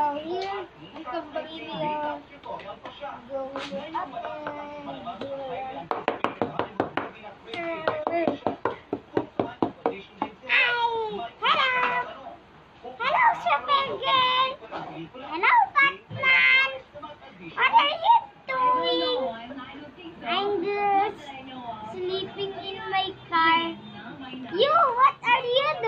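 Nothing stood out as a technical problem on listening to the audio.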